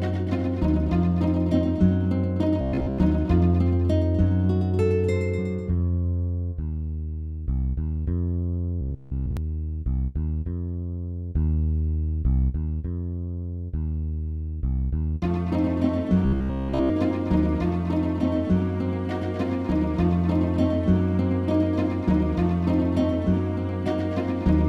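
Three bursts of robotic sound from repeated short buffers interrupt the audio, at 2.61–2.99 s, 8.81–9.37 s and 16.25–16.91 s. Each imposes a rigid, metallic 66.7 Hz buzz, the likely result of audio arriving too slowly so that the last 15 ms was looped in place of the skipped material. The loop covers roughly two-thirds of the first burst and all of the later two. A waveform shows identical 15 ms segments repeating, and a spectrogram shows evenly spaced horizontal bands at multiples of 66.7 Hz.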